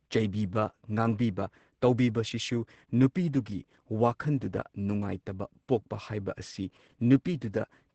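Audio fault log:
Throughout, Opus voice compression: the speech sounds muffled, hoarse and slightly robotic, with nothing above about 8.8 kHz. The damage is heavy, which fits a SILK-mode encode near 10 kbps in 20 ms frames. The coder keeps a wideband spectrum but codes the excitation very coarsely. Unlike a plain low-pass filter, it roughens the voice itself. Unlike MP3-style swirling or pre-echo, it gives a buzzy, vocoder-like hoarseness rather than watery smearing.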